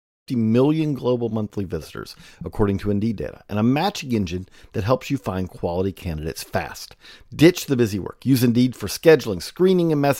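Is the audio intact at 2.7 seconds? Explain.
Yes, the speech at 2.7 seconds is intact, with no fault at that moment.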